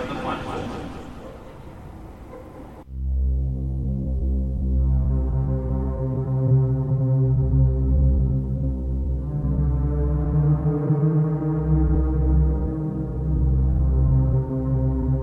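No faults are audible anywhere in the recording, with no dropouts, glitches or level problems at any point.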